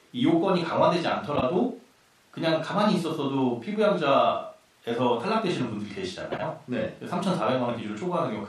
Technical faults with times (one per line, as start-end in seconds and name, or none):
1.35-1.43 frames out of order
6.32-6.43 frames out of order